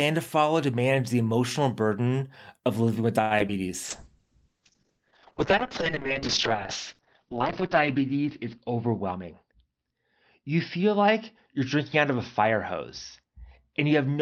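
A short stall from a late packet hits this speech recording at 3.21 to 3.33 s, just after "burden of living with". The packet arrived late and the jitter buffer ran dry, so the receiver stretched the last sound for 92 ms and then resumed from the same point. Nothing is lost, but the sound hangs unnaturally and adds that much delay. Short concealed packet loss follows at 3.39 to 3.42 s and again at 3.48 to 3.50 s. Each time about 20 ms of audio never reached the decoder, and the receiver covered the gap by extending the preceding sound before blending back, leaving a brief smear or wobble. A call bitrate drop begins at 3.85 s and lasts to the end. The encoder fell from 64 kbps to 6 kbps, bottoming out for 3.67 s, and the audio bandwidth shrank from 20 kHz to 6 kHz, so the speech turns coarse, watery and muffled. A jitter buffer speed-up runs from 9.12 to 9.99 s. The receiver trimmed short pitch-period slices to drain excess buffered audio, removing about a tenth of a second, so the speech plays roughly 10% fast at unchanged pitch and sounds hurried.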